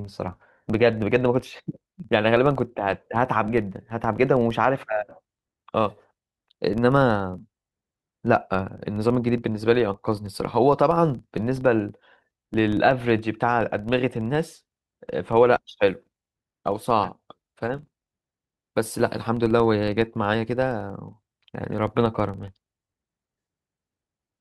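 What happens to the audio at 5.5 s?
At 5.5 s the speech carries the same filter restarted on every block fault heard throughout: the filter resets at each block boundary, so a small transient starts every block. This gives a steady 21.5 Hz tick-buzz, consistent with 2048-sample blocks, that rises and falls with the speech level. Random dropout clicks, by contrast, are irregular and ignore loudness.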